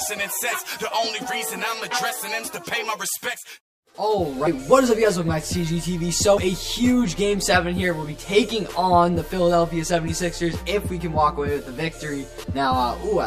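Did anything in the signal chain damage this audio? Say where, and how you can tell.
Yes. Channel delay (comb filtering) runs through the whole clip. One channel arrives roughly 10 ms behind the other, and the two are then summed to mono, probably at a mixdown or playback stage. Everything common to both channels cancels at evenly spaced frequencies, starting around 40 Hz. The result is a fixed set of notches that gives the sound a hollow, phasey colour. The notches don't move, which is why the colour stays constant from start to finish.

Compressed frames were skipped at 4.46 s, 6.36 s and 12.42 s. At each point the audio jumps ahead instead of clicking. About 50 ms is lost at the first two and about 150 ms at the last. The 26.1 ms frame length suggests a perceptual codec, and the losses fit whole frames that were missing from the stored file or rejected by the decoder as damaged. Neighbouring frames overlap, so each join sounds like a short smeared blip rather than a hard edge.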